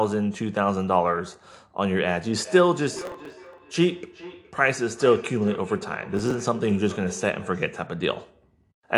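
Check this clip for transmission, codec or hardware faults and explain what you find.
Two faults stand out in this speech recording.

From 2.44 to 7.82 s, each phrase returns thinner roughly every 0.4 s, peaking about 15 dB below the speech. This is feedback echo between two devices: a second device's loudspeaker loops back into the microphone.

From 2.93 to 3.58 s and 6.17 to 6.40 s, a gritty crackle tears across the sound. This is processor overload crackle: dozens of sub-millisecond buffers were dropped over a short stretch.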